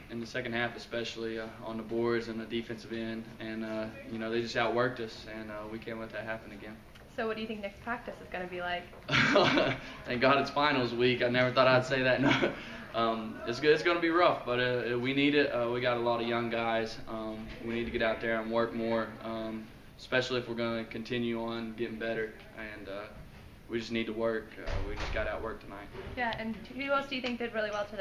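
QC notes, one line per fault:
Nothing stood out on listening.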